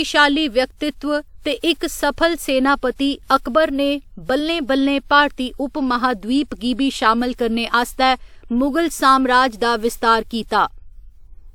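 Generation loss runs through the whole speech clip, start to finish. The sound is swirly and hollow, with consonant onsets smeared and a watery texture that a single pass at this quality wouldn't produce; content reaches up to 20 kHz, so the bandwidth is intact. The likely cause is repeated lossy encoding, about four passes of a WMA encoder at a setting that fits 128 kbit/s, each re-quantising on a shifted frame grid so the errors stack.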